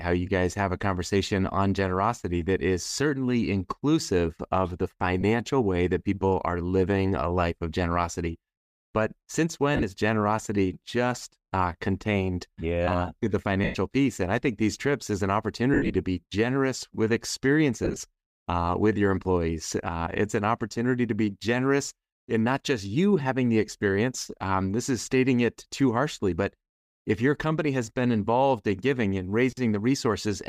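At 5.21, 9.75, 13.64, 15.74, 17.85 and 29.51 s the speech hits lost LE Audio frames: the LC3 decoder patches the gaps, from about 22 ms up to 150 ms scattered over 210 ms, by reusing the last spectrum with random signs, so the sound smears into a brief noisy blur.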